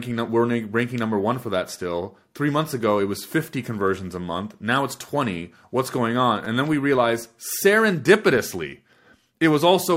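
At 6.45 s, between "what's going on" and "and then we realize", a repeated buffer occurs: fresh audio came late, so a tiny 5.8 ms slice of the speech (which fits a 256-sample buffer) played three times in a row, with a hard seam at each join. That short loop sounds like a brief buzzy click. Unlike a dropout, no speech goes missing; the same fragment is repeated.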